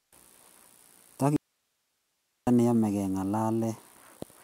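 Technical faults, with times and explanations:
1.36 to 2.47 s, audio dropout to a faint residue: the speech cuts out abruptly for about 1.1 s, leaving just hiss roughly 50 dB down, then snaps back. The signal was likely lost upstream while the path after it stayed live, so there's no fade.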